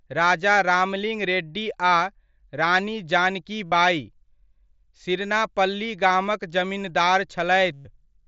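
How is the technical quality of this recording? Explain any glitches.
Two dropouts are audible in this speech, both from concealed Bluetooth headset packet loss, heard through a wideband headset link whose sound tops out near 8 kHz. At 3.66 to 3.72 s and 7.73 to 7.85 s, lost packets were filled by repeating the closest-matching recent stretch of waveform. The 60 ms gap is a short buzz, and the 120 ms run is a longer held tone ending in a slight warble. On a waveform, each shows a periodic, level-steady section. On a spectrogram, it appears as stacked horizontal harmonic lines.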